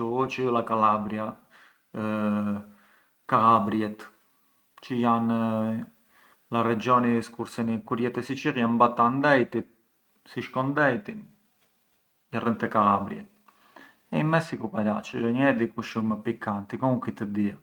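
No technical faults can be heard anywhere in the speech recording. Nothing interrupts or alters the signal at any point.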